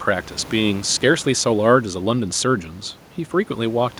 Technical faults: none

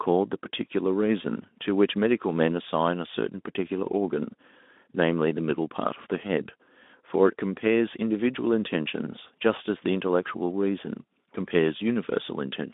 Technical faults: none

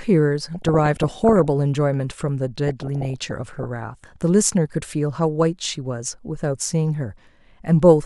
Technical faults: DAB burbling

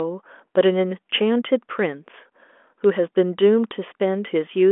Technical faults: none

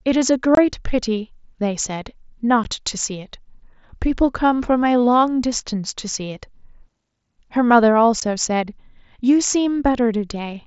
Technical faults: unconcealed Bluetooth headset packet loss

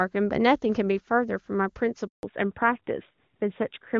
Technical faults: handover gap; fallback to narrowband

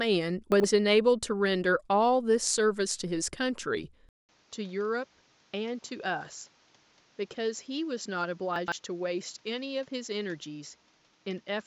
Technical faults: chunks out of order; input switched to a poorer device

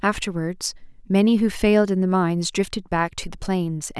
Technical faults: none

